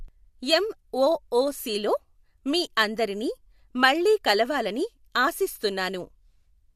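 No technical faults are audible anywhere in the speech.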